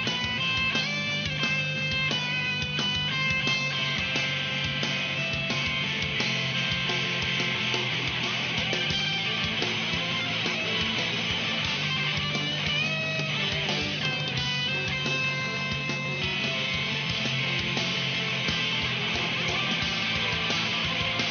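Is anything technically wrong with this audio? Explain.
No, nothing technically wrong can be heard here.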